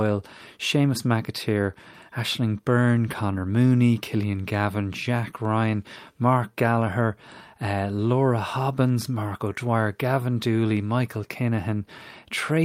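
A speech recording, and nothing is technically wrong with it.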